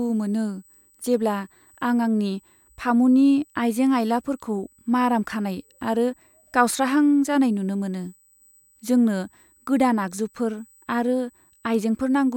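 From start to end, a USB whine sits under the speech as a steady, thin tone at 8 kHz, roughly 35 dB below the speech. It is USB microframe current leaking through power or ground. On a spectrogram it draws an unbroken horizontal line at 8 kHz.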